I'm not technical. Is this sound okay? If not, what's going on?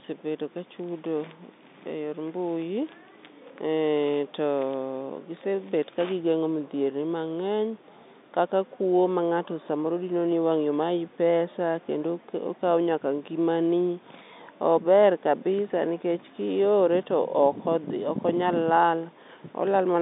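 Yes, this sound is okay; it has the narrower, slightly muffled quality of an ordinary phone call, and nothing in it is going wrong.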